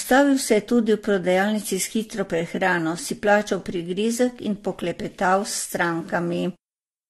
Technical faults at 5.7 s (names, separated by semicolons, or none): transcoding between lossy codecs